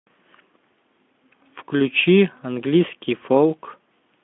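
Nothing faulty stands out anywhere in this recording.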